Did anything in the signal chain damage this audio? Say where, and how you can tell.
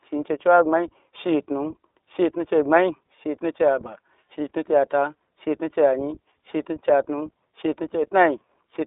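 Yes. The iLBC codec has damaged the whole speech clip at the codec stage. Nothing sounds above about 3.8 kHz, and the low end thins below roughly 250 Hz. Each 20 ms frame has its excitation coded independently, which fits a 15.2 kbps narrowband stream, so the voice comes out plainly rough and synthetic.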